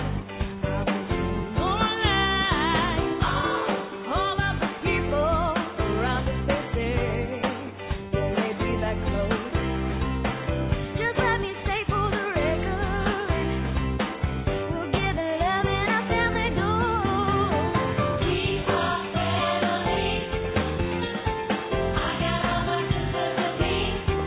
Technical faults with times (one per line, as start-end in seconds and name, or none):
none